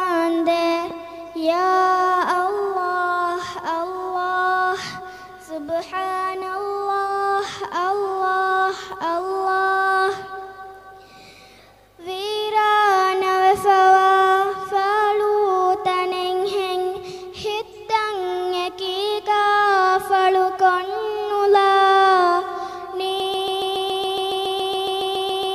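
At 23.2 s the sound locks into a broken-record loop and stays there until the end. A fragment of about 140 ms repeats exactly, back to back, roughly 17 times over the last 2.3 s. The stutter is mechanical and perfectly regular. Whatever should have followed 23.2 s never plays; it is replaced by the repeating fragment. The likely cause is a stalled player, encoder or stream that kept resending the last piece it held.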